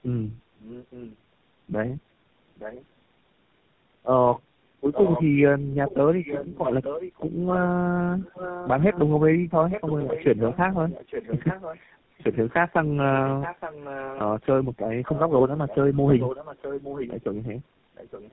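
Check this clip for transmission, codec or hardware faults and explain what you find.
One fault runs through the whole recording, a transmission problem.

Tandem speech coding, present throughout the clip. The speech was encoded, decoded and re-encoded by three low-rate speech coders in a row, and each coder worked on the already degraded output left by the one before. The character points to narrowband codecs around 7.4 to 13 kbit/s, likely ending in GSM full rate. Nothing reaches above 3.8 kHz, so the speech sounds muffled, with a rough, warbling texture that no single coder would leave.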